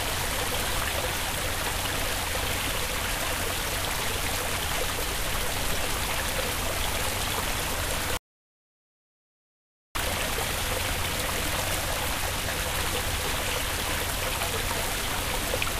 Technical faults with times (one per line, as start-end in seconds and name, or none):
8.17-9.95 audio dropout to silence